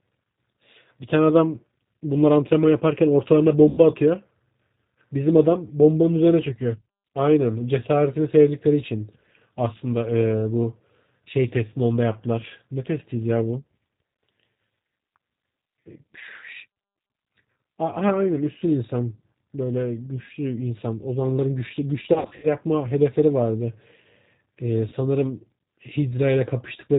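The speech runs through the G.729 codec at 8 kbit/s, which rebuilds each 10 ms frame from a vocal tract filter, a pitch predictor and a few pulses, so nothing above 4 kHz survives and the voice sounds plainly rough and synthetic throughout. At 3.69–3.81 s, then 22.13–22.52 s, and 24.89–24.94 s, VoIP packet loss concealed by the speech codec makes the decoder extrapolate lost audio: about 90 ms, then 180 ms scattered in short runs, then 30 ms. Each gap turns into a fading buzzy tone or coloured noise, with weak, distorted speech lingering briefly afterward.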